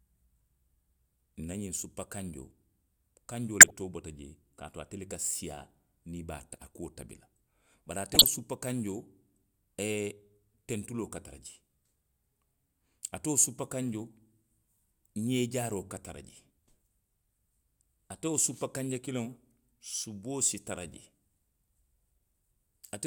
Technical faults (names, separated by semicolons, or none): corrupt frame decoded